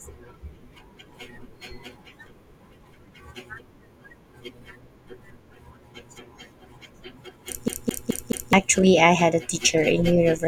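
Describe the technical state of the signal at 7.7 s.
At 7.7 s the speech is caught in a CD stuck on one turn, running from 7.68 to 8.53 s. A scratch keeps throwing the laser back one track. The same 0.21 s slice plays four times. Each jump leaves a brief mute, giving a fast, even stutter.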